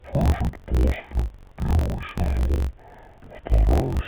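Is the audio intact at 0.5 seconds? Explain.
No, at 0.5 s you're hearing interleaved audio read as planar, and it runs through the whole clip. Each 21.33 ms block, which fits a 1024-sample block, has its first half treated as left and second as right. That drops the speech an octave, doubled and choppy.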